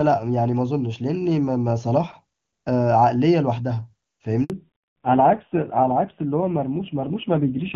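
A handover gap at 4.44 to 4.50 s interrupts this speech clip: for 60 ms no speech frames arrive while the call switches networks, so the sound cuts out and that stretch is lost. Fallback to narrowband follows from 4.50 s to the end. Nothing above 4 kHz remains, and the duller, rougher sound fits a drop from HD Voice to low-rate AMR-NB, around 5.9 kbit/s. The first part carries the wider band of the AMR-WB codec, consistent with its top 23.85 kbit/s rate.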